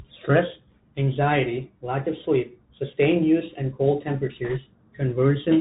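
Throughout the speech, the sound is muffled and boxy, with scratchy s sounds, a granular hiss underneath and roughness on loud high syllables. This is the Bluetooth CVSD headset codec, consistent with a 64 kbps stream, which removes everything above 4 kHz and encodes each sample as a single up-or-down step that cannot keep pace with fast, loud changes.

From 4.45 to 4.58 s, a brief rushing crackle passes over the speech, without sharp clicks. These are bit errors on the Bluetooth voice link, at roughly a couple of percent. Because every CVSD bit carries the same small weight and each error fades quickly, the damage is a spread of noise rather than loud pops.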